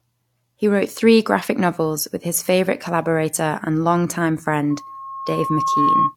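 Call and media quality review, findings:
Loudspeaker feedback squeal, 4.70 to 6.16 s. Single tone near 1.1 kHz swelling over roughly a second, ending several dB above the speech, about 5 dB. Probable component: open mic picking up its own monitor speaker. Loop gain exceeds unity at 1.1 kHz; that frequency regenerates each pass until limited. Runs to the end of the clip, so the loop is never broken.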